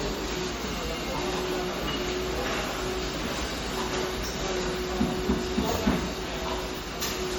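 Throughout the clip, the sound carries plainly audible MP3 compression damage, likely from encoding at a low bitrate in the region of 48 kbps. Weak frequency content flickers in and out between frames, giving a watery, swirling texture and smeared attacks. As with simple low-pass filtering, the treble is cut off: nothing remains above about 20.7 kHz.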